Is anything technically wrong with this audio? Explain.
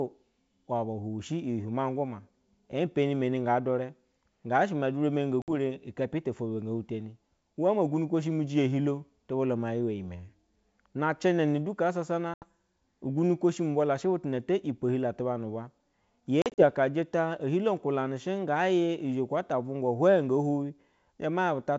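Yes. Packet loss on an ADPCM call occurs three times, cutting into this wideband G.722-style speech: about 60 ms gone at 5.42–5.49 s, 80 ms at 12.34–12.45 s, and 100 ms at 16.42–16.63 s, scattered over 160 ms in runs no longer than 40 ms. Each lost stretch is filled with silence, leaving hard-edged holes. The decoder's adaptive predictor and step size drift from the sender's, so speech resumes slightly distorted before recovering.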